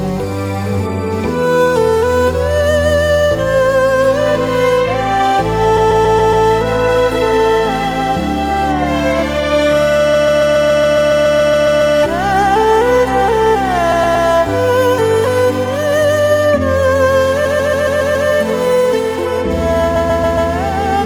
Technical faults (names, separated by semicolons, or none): computer activity noise; repeated frames